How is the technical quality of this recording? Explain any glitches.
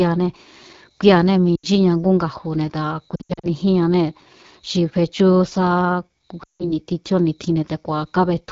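The quality is poor. The speech is audibly coded at a very low rate, and it breaks up three times.

The AMR wideband (HD Voice) codec damage runs throughout. Speech sounds rough and raspy, which fits the 8.85 kbit/s mode, one of AMR-WB's two lowest rates. At this rate the pulse-driven vocal tract model cannot capture the voice finely.

Lost AMR speech frames occur at 1.55 to 1.66 s, 3.15 to 3.47 s and 6.43 to 6.73 s. The decoder repeats its last good settings with falling gain, so the sound smears, fades quickly and returns rough. The middle loss is broken up.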